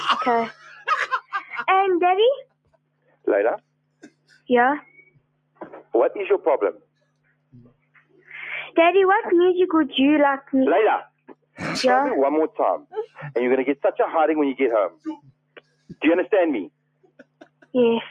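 A noise suppressor built for speech was left running on this non-speech audio, so the noise suppressor was applied to music or sounds. It treats sustained and ambient content as noise to be removed, so level rides up and down by around 15 dB as the processing decides what to keep. Onsets mostly pass while held or decaying parts are pulled down, leaving the sound unstable in level for its whole length.

On top of that steady behaviour, there are seven places where sound is cut by the noise suppressor, each losing more level than the material around it:

0.53–1.33 s, about 14 dB down
2.44–5.94 s, about 22 dB down
6.76–8.3 s, about 21 dB down
11.06–11.6 s, about 21 dB down
12.5–13.19 s, about 21 dB down
14.9–15.99 s, about 21 dB down
16.69–17.74 s, about 22 dB down

In these stretches sustained or fading content sinks or has its tail clipped short, while abrupt sounds come through largely intact.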